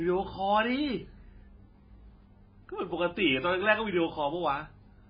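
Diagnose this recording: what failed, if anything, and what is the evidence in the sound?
The failure sits at the codec stage: the speech is likely damaged by heavy MP3 compression. Throughout the clip nothing is present above 5 kHz, so sibilants lose their edge, and the remaining band has a watery, swirling quality with smeared consonant onsets. The encoder was starved of bits, cutting the treble at a fixed point and zeroing weak frequency lines that flicker between frames. The damage fits a very low bitrate, around 16 kbps.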